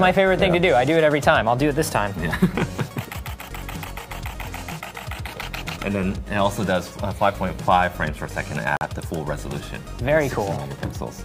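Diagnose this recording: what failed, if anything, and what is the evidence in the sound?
A digital broadcast dropout in the reception stage, between the transmitted stream and the receiver's decoder. At 8.77 s the sound cuts abruptly to silence and returns at 8.87 s, a hole of about a tenth of a second. The receiver got a corrupted or missing frame, failed its checksum, and muted rather than decode bad data. The gap fits the loss of a single frame of about 43 ms plus muting overhead. The audio carried in that interval is gone.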